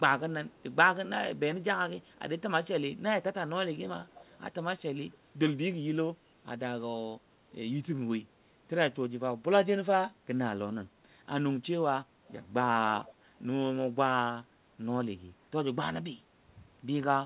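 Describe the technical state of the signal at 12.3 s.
At 12.28 to 12.33 s there is a brief echo leak: a very faint copy of the speech returns 240 ms late, likely residue an echo canceller missed. A spectrogram shows a weak ghost trace below the 4 kHz codec edge, scarcely visible in the waveform.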